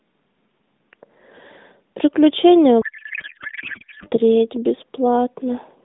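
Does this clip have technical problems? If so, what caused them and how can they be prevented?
Yes. From 2.82 s to 4.09 s the speech turns into garbled, warbling noise that barely tracks the talker. This is a codec payload misread: the AMR frames were packed in octet-aligned format but decoded as bandwidth-efficient, so the decoder took every field from the wrong bit positions. The speech carried over the AMR narrowband path, limited to about 150 Hz to 3.7 kHz and consistent with the 12.2 kbps mode, sounds lightly coded around it. To prevent this, both endpoints should agree on the AMR packing mode during session negotiation.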